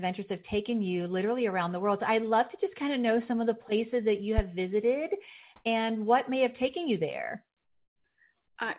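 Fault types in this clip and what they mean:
Loud pop: a single sharp pop at 4.38 to 4.42 s, about 15 dB above the speech, likely from a voltage step such as a switch or static.
Comfort noise in place of the background: at 5.56 to 5.64 s and 7.64 to 8.04 s, smoother synthetic noise replaces the background, likely from discontinuous transmission, shifting level by about +32 dB and about -10 dB.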